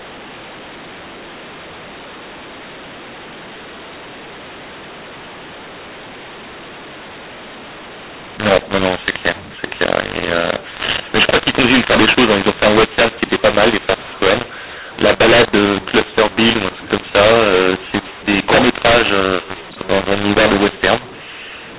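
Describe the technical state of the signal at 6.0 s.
At 6.0 s the speech carries a mu-law and A-law mix-up that runs through the whole clip. Telephone audio coded with the mu-law G.711 curve is being expanded with the A-law curve, so sample magnitudes map to the wrong levels: some too loud, some too soft, and near-silent samples pushed well up. The result is harsh, gritty distortion on the speech, with noise filling the gaps, all inside a band that stops at 4 kHz, consistent with 8 kHz telephone coding.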